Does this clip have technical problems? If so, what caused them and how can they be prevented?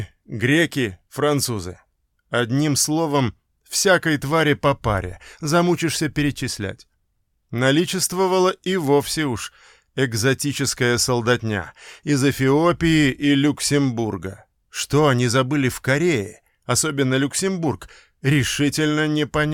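No, no technical faults heard.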